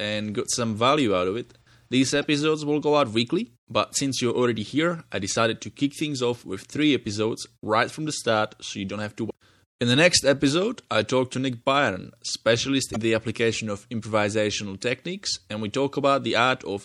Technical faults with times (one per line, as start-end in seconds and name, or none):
0.00-16.84 MP3 compression
2.22 damaged data in a compressed stream
9.26-9.31 damaged data in a compressed stream
12.92-12.96 damaged data in a compressed stream